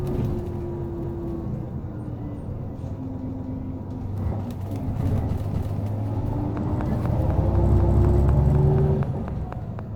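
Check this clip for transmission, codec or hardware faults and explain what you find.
Two faults show up here: a repeating stutter from overlapping chunks, and a steady train of clicks over the last few seconds.

Overlapping chunks hit at 1.04, 3.29, 5.54 and 7.79 s. The audio was handled in 2-second blocks, each starting 250 ms before the previous one ended, so that quarter-second replays at every join, giving a regular stutter roughly every 2.25 s.

The train of clicks runs from 6.57 s to the end: sharp, same-shaped ticks about 4 times a second, evenly spaced and about 10 dB above the sound itself, so they're audible throughout. The likely source is interference from nearby equipment or a faulty connection or power supply.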